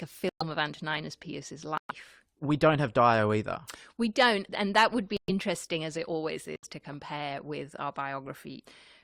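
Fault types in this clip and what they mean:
Corrupt frame muted: the decoder rejected damaged compressed frames and silence replaced them, cutting abrupt gaps into the speech at 0.29, 1.78, 5.17 and 6.56 s, 0.09 to 0.14 s each. The waveform drops flat with hard edges; the spectrogram shows blank vertical bands.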